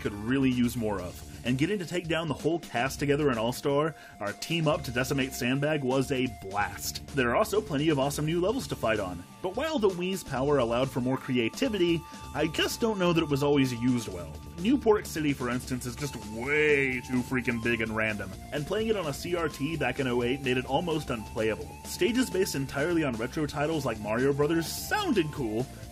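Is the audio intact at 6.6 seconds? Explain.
Yes, the audio is intact at 6.6 seconds, with no dropout, click, distortion or other fault audible at that point.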